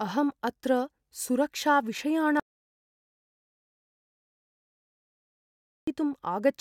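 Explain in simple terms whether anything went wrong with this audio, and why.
Something did go wrong. At 2.40 seconds the speech suddenly stops, and the clip goes completely silent until 5.87 seconds, so about three and a half seconds of talking are simply gone. That's an audio dropout to silence. Even a quiet room leaves a faint hum, so dead silence like this likely means the input was lost for a moment, through a loose connection or an accidental mute, while the recording kept running and filled the gap with nothing.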